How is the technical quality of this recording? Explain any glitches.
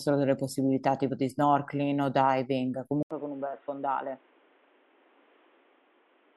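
The recording changes character partway through. At 3.03 s, after a gap of about 80 ms, the speech turns dull and boxy, with nothing above 3.8 kHz. It becomes roughly 5 dB quieter and picks up a faint new background noise, about 30 dB below the speech, until the end. The likely cause is an input switched to a poorer device, a narrower-band microphone or headset call profile.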